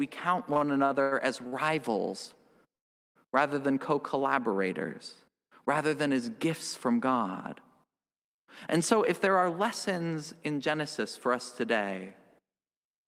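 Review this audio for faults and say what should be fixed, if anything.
Repeated stalls (stutter) from 0.53 to 1.54 s: six brief gaps, longest 95 ms, were filled by stretching the preceding sound, so a quarter of that span drags. These appear as smeared, repeated spectral frames. A deeper jitter buffer on the receiving side would absorb such late packets.

A call audio freeze from 2.75 to 3.17 s, just before "rather than co", fills about 0.4 s, almost entirely with silence. It is likely due to packets held up in transit, and shows as a flat waveform gap. Steadier network routing or prioritising audio traffic would prevent it.

A jitter buffer speed-up from 8.93 to 11.98 s plays about 6% fast at unchanged pitch, with roughly 0.2 s of pitch periods removed. Harmonics stay level while syllables crowd closer together. Draining excess buffer more gradually would avoid the hurried pacing.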